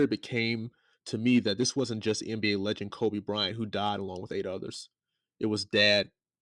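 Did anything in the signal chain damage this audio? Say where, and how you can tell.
No, nothing in the chain audibly damaged this speech.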